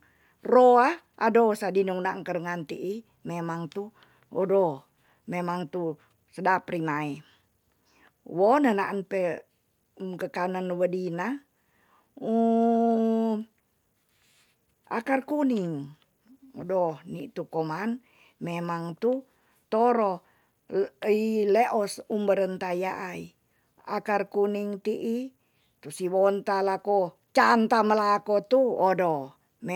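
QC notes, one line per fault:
Nothing to flag here; I listened all the way through this speech recording and didn't hear a single technical problem.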